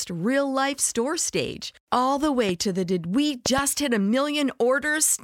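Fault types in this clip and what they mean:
Loud pop: sharp pulses, likely an electrical spike; tall waveform spikes and full-height spectrogram stripes, one pop then a double pop, up to about 15 dB above.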